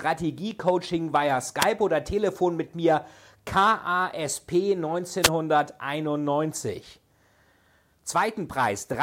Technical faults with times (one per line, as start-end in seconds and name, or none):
1.60-1.65 wireless microphone noise hit
5.22-5.29 wireless microphone noise hit